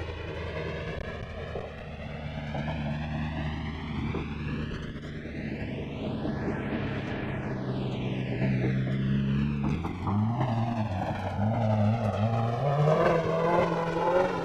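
Channels drifting apart runs throughout the clip: the left and right sides sit on clocks that disagree by a few hundred parts per million, so their offset creeps to around two milliseconds, and summed to mono the comb notches sweep slowly, giving a gradual flanging swirl.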